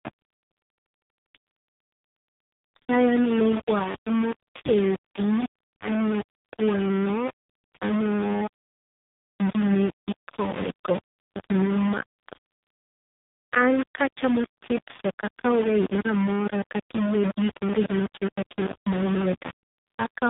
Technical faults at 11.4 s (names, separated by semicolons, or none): low bit depth without dither; AMR narrowband mobile codec